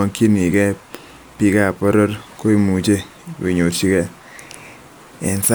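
No technical faults are audible anywhere in the recording.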